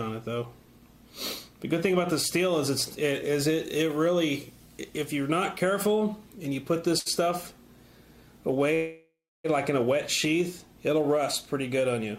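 A short stall from a late packet at 6.99 to 7.08 s holds the last sound for about 63 ms until the packet arrives; nothing is lost.

A call audio freeze from 8.75 to 9.46 s carries the last sound on as a fading buzz or hiss, then 310 ms of silence. Packets held up in transit, likely emptying the jitter buffer, would explain it. The audio resumes where it stopped, 696 ms late.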